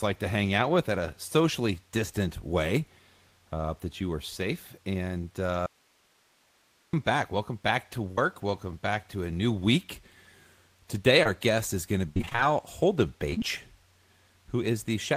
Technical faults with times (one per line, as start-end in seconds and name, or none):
5.66-6.93 audio dropout to a faint residue
8.11-8.19 burst of packet loss
11.23-11.27 short concealed packet loss
12.09-12.40 repeated packet loss (robotic sound)
13.30-13.42 short concealed packet loss